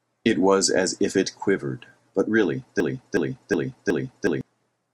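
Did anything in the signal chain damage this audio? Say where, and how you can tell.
Yes. A broken-record loop runs from 2.80 to 4.41 s. A 0.37 s fragment of speech repeats exactly, back to back, four times. The speech meant for that span is lost. The likely cause is a stalled playback or stream buffer resending its last fragment.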